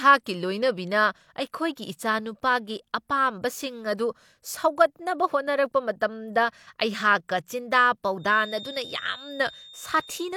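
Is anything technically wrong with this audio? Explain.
Yes. From 8.16 s to the end of the speech, a feedback whistle appears, likely from a loudspeaker-to-microphone loop sitting just short of runaway gain. A thin, steady tone at 3.6 kHz rings about 20 dB below the speech, swelling and fading slowly without growing into a howl.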